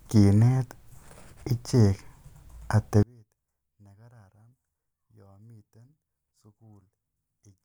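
From 3.03 s to the end, the speech drops by about 34 dB to a faint residue. The likely cause is one channel inverted, so content shared by left and right cancels in mono. Unlike a dropout, a weak trace remains audible.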